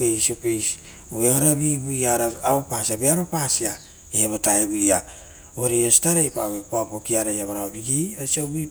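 A speech recording with nothing technically wrong with it.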